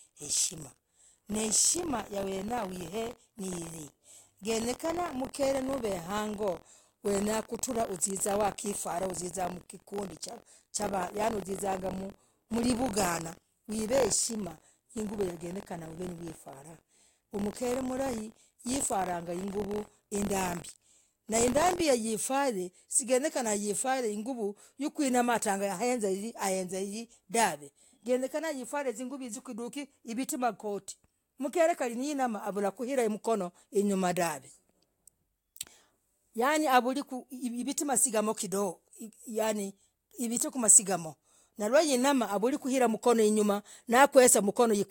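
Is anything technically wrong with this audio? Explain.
Yes. From 0.0 to 21.81 s the speech carries a robotic 43.1 Hz buzz: buffer tearing, which fits a 1024-sample buffer where each period splices in a small slice of audio from about 50 ms earlier.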